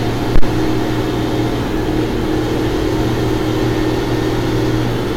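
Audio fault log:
0.36–0.49 s, phantom power thump: supply switched on or off on a live input, the step punches through the coupling caps as a deep thump, hitting the converter's limit, gone in 29 ms.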